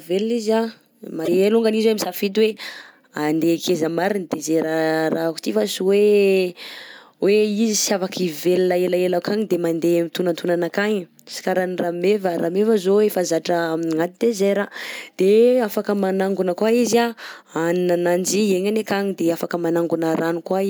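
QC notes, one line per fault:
1.22–1.28 s, damaged data in a compressed stream: right after "izy anh" the speech breaks up briefly for about 70 ms. Corrupted bytes in the compressed data make the decoder misread those frames and lose sync until it finds the next valid frame header, so nonsense output briefly replaces the speech. On a spectrogram this shows as a brief broadband smear or streak cutting across the harmonics; on the waveform, an abrupt segment with a jagged, discontinuous envelope.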